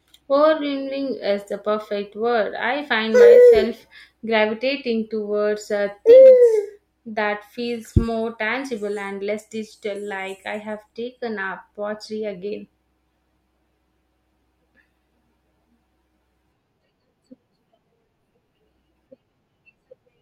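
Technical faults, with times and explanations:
No technical faults can be heard anywhere in this speech recording. Nothing in it calls for a time or an explanation.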